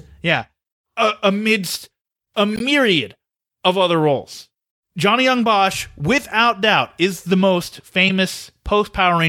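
Speech, with corrupt frames decoded at two points: a brief garbled burst from 2.54 to 2.61 s, sounding like a handful of damaged frames, and a sharper, much louder blip at 8.07 to 8.11 s, likely a single bad frame where flipped bits scrambled its gains and codes.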